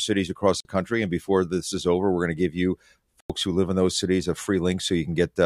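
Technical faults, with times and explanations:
0.60–0.65 s and 3.20–3.30 s, block of digital silence: the speech cuts abruptly to dead silence, a 46 ms hole and then a 93 ms one, each cutting out and back in with no fade. The lengths fit unfilled 2048- and 4096-sample output buffers.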